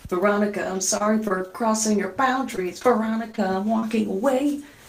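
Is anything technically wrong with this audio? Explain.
Yes. Scattered short gaps run from 0.97 s to 3.84 s. Across that stretch, around fifteen small pieces of the stream were lost or arrived late, each patched by the receiver stretching the sound just before it. None of the holes is longer than about 30 ms, and the patching covers roughly 7% of the span. The audio stays clear, but brief ticks, smears and hiccups keep breaking in throughout that section.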